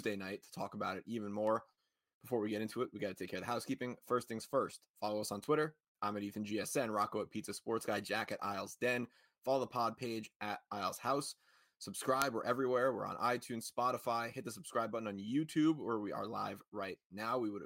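At 1.47 s, 5.44 s and 12.22 s there is a bit error spike, where a single flipped bit throws a sample value off by a power of two before it snaps straight back. Each is a lone sharp tick unrelated to the surrounding sound, loudest at 12.22 s (about -10 dBFS, against about -34 and -28 dBFS earlier). On a waveform each shows as a needle two or three samples wide. A spectrogram shows a thin vertical line spanning all frequencies.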